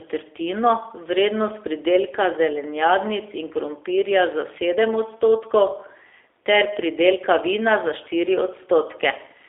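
The speech in this clip has been through the G.729 codec, in its lighter G.729A form, at a rate that sounds like 8 kbit/s. That codec keeps only a model of the vocal tract, a pitch predictor and a few pulses per frame, and the telephone band runs from about 300 Hz to 3.6 kHz throughout. The voice sounds boxed and thin, with a plainly audible rough, buzzy, synthetic edge from start to finish.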